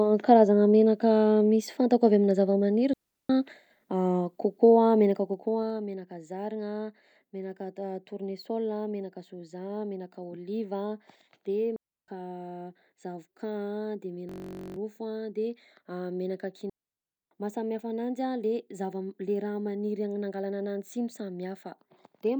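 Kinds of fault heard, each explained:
Digital wireless dropout: the radio link lost too much data, so the receiver simply muted with a quick fade, leaving clean near-silent holes, no noise burst around them. Three here: 2.93 s (about 0.36 s), 11.76 s (about 0.32 s), and 16.70 s, the longest at about 0.62 s.
Zipper noise: between 5.08 and 5.89 s the level drops by roughly 10 dB in 1 dB jumps, about fifteen a second, with nothing smoothing them, so each step ticks and you get a zippy rattle riding on the speech while it moves.
System hang loop: at 14.29 s the machine froze while the audio hardware kept replaying one 21.33 ms chunk, which fits a 1024-sample buffer, about 22 times through 14.76 s. At roughly 47 Hz it comes across as a steady buzz, and around half a second of real audio is gone.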